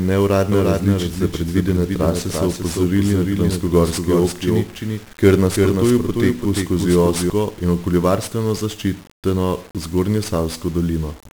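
From the first moment the speech carries 1-bit DFPWM compression: a single bit per sample nudges an adaptive level up or down, so heavy broadband quantisation noise smothers everything in fuzz and crackle, and the treble drowns in hiss, which fits a 48 kbps stream rather than ordinary lossy-codec smearing.

From 0.52 s to 7.30 s a doubled audio track runs alongside, most likely a second capture or misaligned edit. A full-band copy trails by around 300 ms at about 5 dB down, dry and abrupt at both ends, unlike a decaying room echo.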